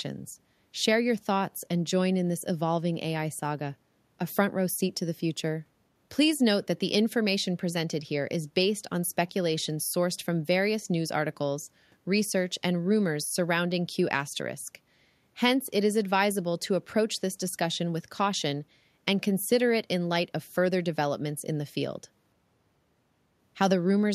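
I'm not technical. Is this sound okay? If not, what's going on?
Yes, the sound is fine; nothing is wrong here.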